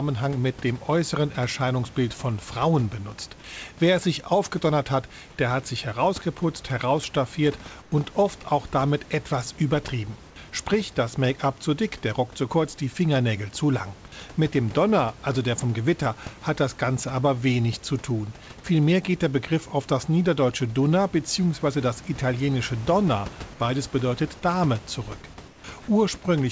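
Twice the room's background briefly gives way to a flatter, featureless hiss about 5 dB quieter. The first is for 100 ms at 7.82 s, between "hat sich herausgeputzt herausstaffiert" and "oft auch damit etwas". The second is for 160 ms at 25.48 s. That is comfort noise in place of the background in speech that has passed through a call codec with nothing above 8 kHz. The likely cause is discontinuous transmission: the sender stops in pauses and the receiver fills them with synthetic noise.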